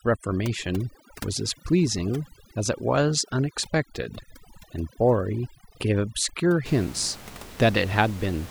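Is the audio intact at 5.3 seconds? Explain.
No. At 5.3 seconds the background drops, with specks twinkling in it. This is overdone noise removal, running from 0.0 to 6.66 s: the processing shuts off individual frequency bands that sit near its estimate of the room noise, which lies about 18 dB below the speech, and the quieter parts of the speech get removed along with it.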